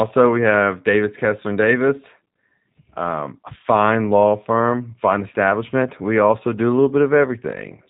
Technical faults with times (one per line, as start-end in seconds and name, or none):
0.00-7.90 G.729 codec